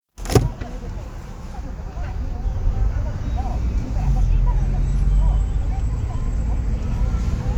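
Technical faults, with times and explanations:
2.02 s and 7.32 s, compressed frames skipped: the sound lurches forward, losing roughly 70 ms each time. About three 23.2 ms frames went missing or were rejected as damaged, so the audio jumps ahead by their length.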